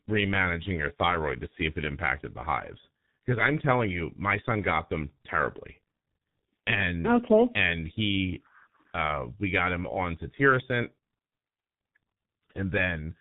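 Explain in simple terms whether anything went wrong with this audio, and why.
The speech runs through the G.723.1 codec from start to finish, heavily damaged: everything above 4 kHz is gone, and voices turn hoarse with smeared consonants. Unlike simple muffling from a filter, the voice itself sounds rough and reconstructed, because this codec rebuilds speech from a slowly updated model.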